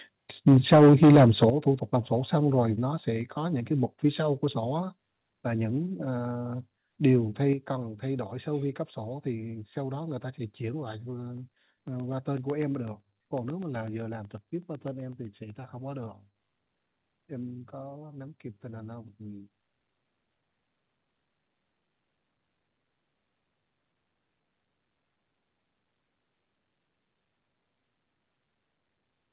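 From 0.47 to 1.49 s the speech distorts with a harsh, crackling edge, likely microphone overload: input about 9 dB too hot drove peaks into the converter's ceiling, so roughly a sixth of samples sit flattened against the converter's limit. The waveform shows squared-off tops, and the spectrogram shows broadband splatter on those syllables.

Sudden level drops follow at 0.48 s (about 2 dB), 1.5 s (about 9 dB), 3.21 s (about 2 dB) and 7.53 s (about 6 dB), with voice and background falling together, likely the microphone volume stepped down by software reacting to the clipping. The waveform envelope shrinks abruptly at each point, with no fade.

Between 11.37 and 15.50 s a regular ticking rides on the speech, the signature of periodic USB or driver dropouts: every 0.125 s, eight times a second, about a millisecond of audio is replaced by silence. The waveform shows evenly spaced tiny gaps, and the spectrogram shows thin vertical lines, visible only where signal is present, within the telephone-band audio that stops at 4 kHz.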